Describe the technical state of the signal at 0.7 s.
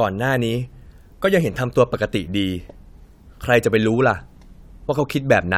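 Clock slip clicks run through 0.7 s, part of a series from 0.27 to 5.46 s: faint regular ticks roughly every third of a second over the speech, likely from two unsynchronised clocks differing by around 70 ppm, each dropping or repeating one sample.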